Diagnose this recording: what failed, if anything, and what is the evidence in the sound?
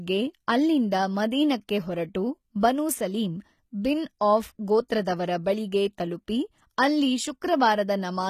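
The codec stage failed: throughout the speech the treble sounds synthetic, with s sounds gritty and metallic, which likely points to HE-AAC compression at a bitrate around 20 kbps. Only the lower band is truly coded. Spectral band replication copies it upward under a coarse envelope, so upper harmonics fail to align with the fundamentals below. A spectrogram would show blocky, repeated-looking texture in the upper band and nothing at all above 15 kHz.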